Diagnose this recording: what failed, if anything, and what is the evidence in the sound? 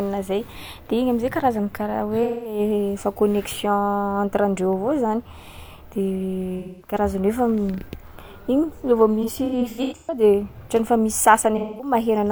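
The codec stage failed: AAC frame loss with concealment. Smeared, noisy patches of about 213 ms sit at 2.23–2.59 s, 6.58–6.94 s and 11.57–11.93 s, each fitting a run of roughly five lost frames. From 9.22 to 10.23 s about 469 ms is lost in scattered bursts, the longest near 150 ms. The decoder rebuilds each gap from the last good spectrum, so the sound turns phasey instead of dropping to hard silence as a raw dropout would.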